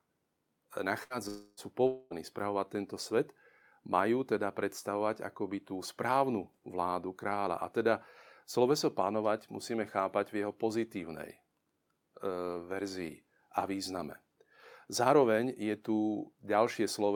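A speech recording with a burst of packet loss at 1.03–1.13 s: about 66 ms of concealed sound fading on the spectrogram, with 60 ms skipped. Two gaps at 1.28–1.6 s and 1.87–2.14 s are likely long network dropouts, each showing a smeared, decaying concealment tail on the waveform before the audio resumes further on.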